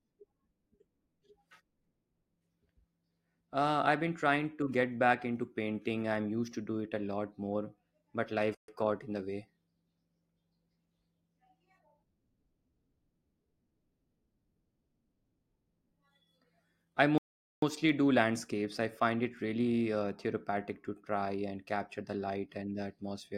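At 8.55 s the speech drops to complete silence for about 135 ms, then resumes at 8.68 s. A longer gap follows from 17.18 to 17.63 s, roughly 0.44 s. Both are most likely Bluetooth stalls: radio interference held back packets, the receiver's buffer emptied, and playback waited for retransmissions. Each sounds like an abrupt cut and restart, shows as a flat line in the waveform, and appears as a clean blank vertical band across all frequencies on a spectrogram.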